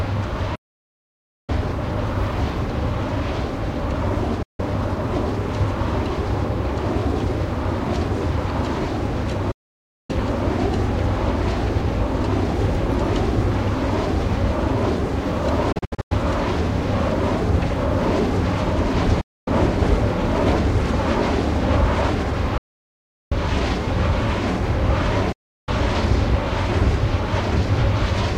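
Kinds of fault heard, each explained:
Digital broadcast dropout: at 0.55, 4.42, 9.51, 15.72, 19.21 and 25.32 s, the receiver stops getting decodable frames and mutes, fading out over about 8 ms and back in once clean frames return. The holes last 0.93, 0.16, 0.58, 0.26, 0.26 and 0.35 s, each a multiple of 32 ms, which fits 32 ms codec frames. The one at 15.72 s is broken into several short holes, the longest 96 ms. The sound sent during the muting is lost.
Audio dropout to silence: from 22.58 to 23.32 s, about 0.74 s, the sound cuts abruptly to silence, with no room tone or background underneath, then resumes mid-flow. The recorder kept writing silence while its input was missing. The likely cause is a momentary loss of the input, such as a disconnected device, a failed link or a stray mute. Whatever occurred during that gap was never captured.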